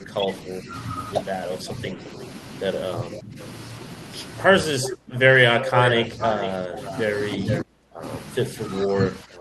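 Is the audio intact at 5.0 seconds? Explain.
No. From 4.47 s to the end, both sides likely talked at once and the echo canceller ducked the talker, pulling the speech down by roughly 20 dB at its deepest. Overlapping this, from 4.82 to 7.63 s, an echo leak likely lets the far end's loudspeaker echo back, heard as a copy delayed by about 0.44 s and only about 5 dB quieter.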